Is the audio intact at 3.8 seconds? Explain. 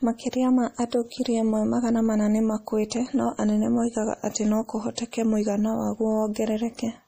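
No, MP3 compression is likely at work throughout, including 3.8 s: starved of bits at what sounds like about 40 kbps, the encoder strips everything above 15.3 kHz and drops weak detail, so the speech sounds plainly watery and swirly.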